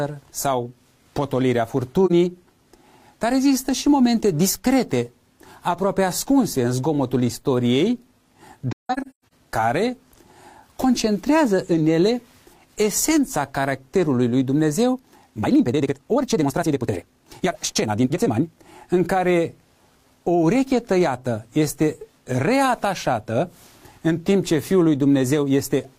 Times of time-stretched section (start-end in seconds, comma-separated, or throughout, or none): 14.91-18.59